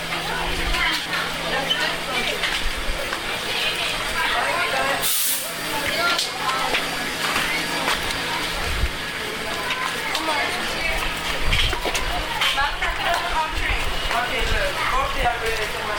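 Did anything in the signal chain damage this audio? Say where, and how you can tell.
Yes. The damage is at the wireless link, as lost LE Audio frames. Short gaps fall at 1.02 to 1.06 s, 3.05 to 3.08 s, 7.11 to 7.14 s, 9.71 s, 13.16 to 13.18 s and 15.23 to 15.25 s. They last 10 to 40 ms, in steps that fit 10 ms LC3 frames. At each one the sound turns briefly into a noisy smear. The LC3 decoder fills the hole by repeating the last spectrum with random signs. The light lossy compression underneath is not the cause.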